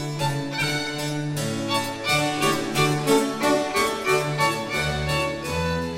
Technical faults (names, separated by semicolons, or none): none